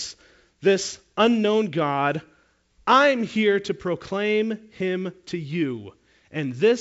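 No faults can be heard in the speech, which carries the character of G.722 wideband telephone coding at 64 kbit/s, with its band ending near 7.7 kHz and at most a faint trace of the coding itself.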